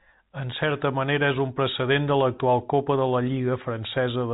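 No technical faults occur in this speech clip; it carries ordinary G.711 telephone coding, with nothing heard above about 3.8 kHz.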